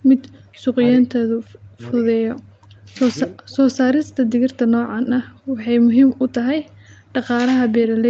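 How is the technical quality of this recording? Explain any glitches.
The recording has two call-related faults in its first four seconds of speech.

From 0.32 to 0.39 s there is a very faint echo leak, about 35 dB below the speech and trailing it by roughly 0.36 s. It is likely caused by incomplete echo cancellation. On a spectrogram it appears as a pale, delayed copy of the speech.

Speech suppressed in double talk occurs at 0.40–0.66, 0.99–2.13, 2.52–2.80 and 3.10–3.71 s. In these stretches the speech sinks by as much as roughly 40 dB, likely because the canceller turned the talker down while the far side spoke. The waveform shows these as sudden hollows in the envelope.

Spectrogram energy stops at 8 kHz throughout, which fits the call's Opus coding.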